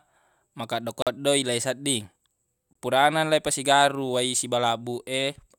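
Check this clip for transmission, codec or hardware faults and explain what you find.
Two short dropouts in the speech, both looking like a Bluetooth stall. At 1.02 to 1.07 s the sound cuts to silence for about 44 ms, and at 2.73 to 2.75 s for about 23 ms, then carries on. That's likely interference holding up packets until the headphone buffer ran dry.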